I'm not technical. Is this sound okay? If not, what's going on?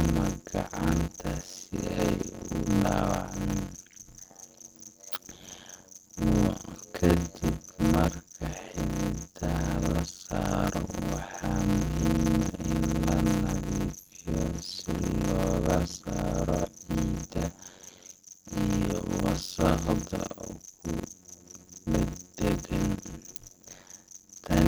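No. The speech carries a steady buzz at about 92 Hz from start to finish and plays at roughly half speed (0.53 times) with its timbre unchanged. This is a block size mismatch (padded): each short chunk of sound, which fits 256 samples, gets topped up with silence.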